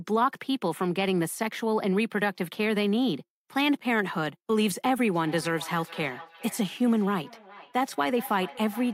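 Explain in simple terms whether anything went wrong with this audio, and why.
From 5.14 s to the end there's feedback echo between two devices: a second device replays the speech, and it loops back roughly every 0.4 s.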